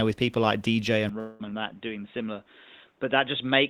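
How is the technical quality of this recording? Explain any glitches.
The quality drops partway through, with two glitches.

From 1.09 s to the end, the input was likely switched to a poorer device. Nothing above 3.8 kHz gets through, so the speech turns dull and boxy and about 5 dB quieter, with a faint new noise floor.

From 1.19 to 1.41 s, a long network dropout likely cut off about 200 ms of audio. The receiver filled the gap by stretching the last sound into a fading buzz, and that stretch of speech never returns.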